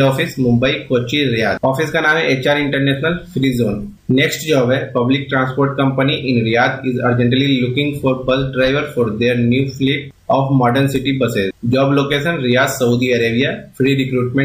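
No technical faults can be heard anywhere here.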